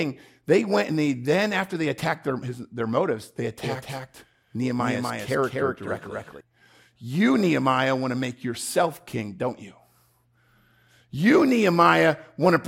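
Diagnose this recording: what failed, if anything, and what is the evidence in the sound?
A doubled audio track runs from 3.63 to 6.41 s: a full-band copy of the speech trails by around 300 ms, about 5 dB down, and switches on and off abruptly. Lacking acoustic echo's decay and room colour, it likely comes from a second, slower capture path in driver routing.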